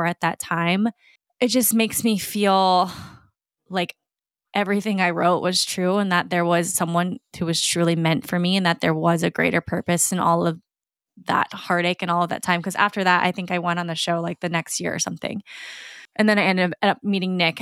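No technical faults turn up anywhere in this speech recording, so there's nothing to flag from the first moment to the last.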